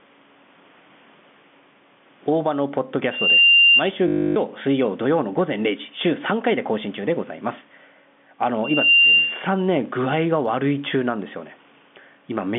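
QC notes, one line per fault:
Throughout, gain pumping: the level keeps breathing by around 10 dB. The room noise sits well under the speech. Loud and quiet stretches end up squashed close together. The likely cause is input gain set far too hot for the mic, with a fast limiter or compressor clamping down on each loud syllable and letting go in the pauses.
3.11 to 3.83 s and 8.64 to 9.46 s, loudspeaker feedback squeal: both times a single tone at 2.8 kHz creeps in and builds to full strength in roughly a third of a second. It ends up about 15 dB over the speech the first time and about 10 dB over it the second. The mic is hearing the loudspeaker it feeds, and at that frequency the loop gain goes past one, so the tone keeps feeding itself until the loop breaks.
4.08 to 4.36 s, packet loss with last packet repeated: 280 ms of audio goes missing, and the receiver fills the gap by replaying the last good chunk over and over. 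Together they make a robotic stutter with a 50 Hz buzz, which fits a run of 20 ms packets being lost.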